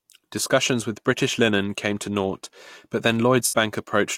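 Channel delay (comb filtering) runs from 0.32 to 2.99 s. One channel trails the other by roughly a single sample, so summing to mono cancels only at the very top, with the first notch around 20 kHz. The sound loses a little air and brightness rather than turning obviously hollow.

AAC frame loss with concealment follows from 3.46 to 3.54 s. About 64 ms of audio was missing, which fits a run of three lost frames. The decoder patched the gap by reusing the last good spectrum, producing a brief smeared, noisy and phasey blur.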